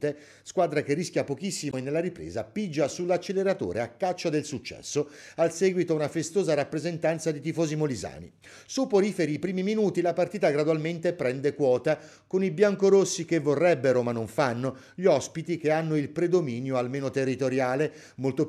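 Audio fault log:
1.69–1.74 s, damaged data in a compressed stream: a brief glitch of about 50 ms, because corrupted bytes made the decoder misread those frames, lose sync and jump ahead to the next valid frame header.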